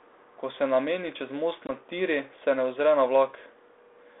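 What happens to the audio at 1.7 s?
Right around there, from 1.67 to 1.70 s, there's packet loss on the ADPCM call. About 20 ms, roughly two packets' worth, drops to a hard-edged silent gap. The 32 kbit/s G.726 decoder's predictor then loses track of the sender, so the speech comes back slightly distorted.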